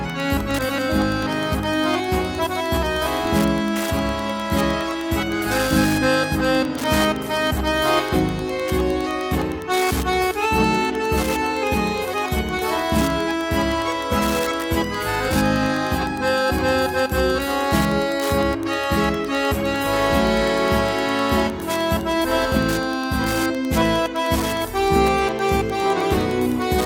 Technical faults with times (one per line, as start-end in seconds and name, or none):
0.00-26.86 Wi-Fi interference